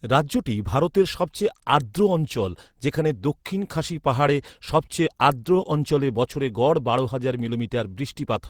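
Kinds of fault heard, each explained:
No technical faults are audible anywhere in the speech.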